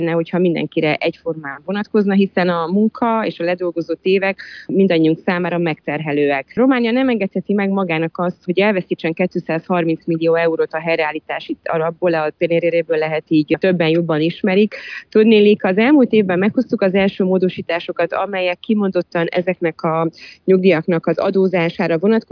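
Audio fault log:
No fault is found in the audio.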